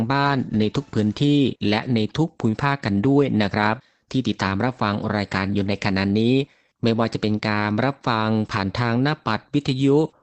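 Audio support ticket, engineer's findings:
No findings on this speech clip; the call path carries it normally, with the top end stopping around 8 kHz as expected for the codec.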